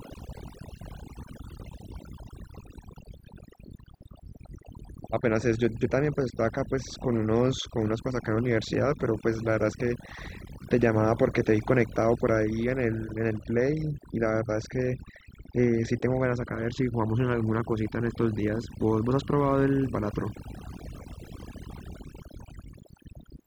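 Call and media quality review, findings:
Overdone noise removal, throughout. Background near-silent with twinkling specks, quiet parts of voice lost. Noise suppressor set too strong gates bands near its noise estimate, unlike codec smearing or dropouts.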